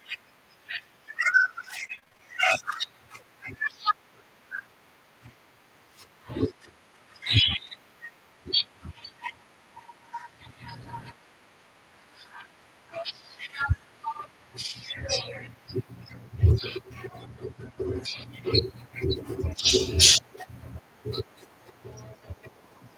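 From 1.79 to 2.21 s, repeated packet loss gives choppy sound: gaps up to 30 ms are patched with repeated sound, leaving visible waveform breaks and smeared, striped spectrogram columns.

At 7.67 to 7.69 s, a lost packet rebuilt from error correction leaves 20 ms of rougher, noisier sound with no gap, visible as a brief grainy patch on the spectrogram.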